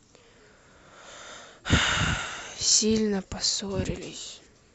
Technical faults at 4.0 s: none

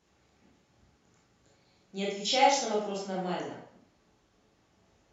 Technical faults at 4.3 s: none

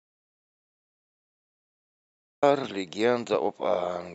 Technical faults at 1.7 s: audio dropout to silence

